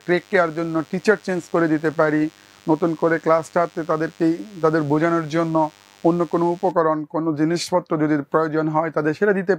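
DECT cordless phone buzz runs from the start to 6.71 s: a thin, steady 100 Hz buzz with many harmonics, roughly 30 dB below the audio, from a nearby handset's 10 ms radio bursts being rectified in the circuit.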